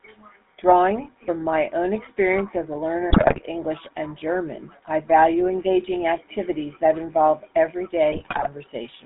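GSM full-rate codec damage runs through the whole recording: the speech has the coarse, buzzy grain of a vocal-tract model excited by a sparse train of regular pulses, with only every third excitation sample kept, which fits the 13 kbps GSM full-rate coder. The band is held to roughly 200 Hz to 3.6 kHz, so the top of the voice is gone, and the gravelly roughness is plainly audible throughout.

GSM bit errors break in from 3.10 to 3.41 s and again from 8.12 to 8.47 s. Corrupted bits reached the decoder, so the filter, pitch and gain values it rebuilt frames from were wrong. The spectrum warps and the level jumps frame by frame, turning the speech into squawks, pops and gargling. The second burst has the higher error rate, about 4.5% against about 3.3% in the first.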